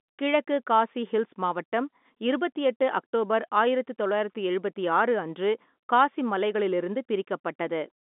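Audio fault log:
Nothing to log here, just speech coming down an ordinary G.711 phone line, with the band running from about 200 Hz to 3.6 kHz and nothing above 3.8 kHz.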